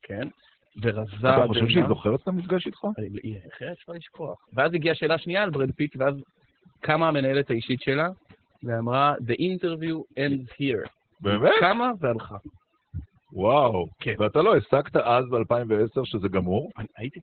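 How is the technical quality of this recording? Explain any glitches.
Poor: two faults affect the speech from start to finish.

Overdone noise removal runs throughout. Bands near the noise estimate are cut hard, leaving near-silent gaps with twinkling specks.

Opus voice compression also runs throughout. Its narrowband SILK mode leaves nothing above 4.3 kHz and, with heavy damage fitting roughly 8 kbps, sounds muffled, hoarse and robotic.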